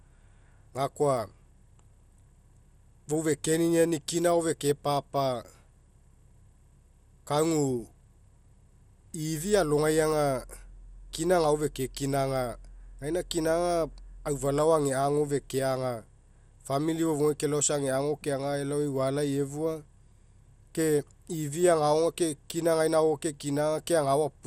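Likely MP2 compression at a low rate, consistent with around 80 kbps, affects the whole of this speech clip: starved sub-bands switch off and the rest are coarsely quantised, so the sound is dull, gurgling and granular, with nothing above about 16.4 kHz.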